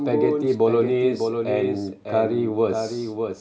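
Throughout, the speech is followed by a dry, slightly quieter full-band copy about 0.7 s behind: a doubled audio track, likely from a second, slower capture path.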